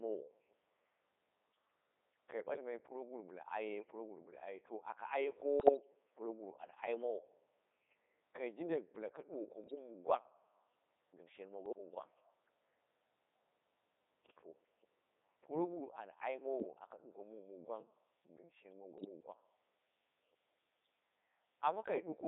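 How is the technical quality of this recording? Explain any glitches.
The recording is heavily degraded, with a synthetic vocoder sound throughout and several brief bursts of corruption.

Codec 2 vocoder, throughout: the speech comes through a very low-rate vocoder, consistent with 3.2 kbit/s, in a 300 Hz to 3.7 kHz band. It is rebuilt from pitch, voicing and spectral envelope rather than the original waveform, so it sounds robotic and buzzy.

Bit errors on digital voice radio occur at 5.60–5.77 s, 9.64–9.75 s just after "jindai bɨla ka duwako", 11.66–11.78 s just after "gɨm shen", 16.60–16.76 s, and 18.98–19.09 s. A few percent of corrupted bits scramble the frame parameters, producing brief warbling, bleeping jumps in pitch, level and tone.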